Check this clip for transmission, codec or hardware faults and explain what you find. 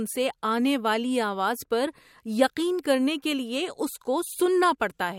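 Nothing to report here; the speech comes through without a single fault I can pick out.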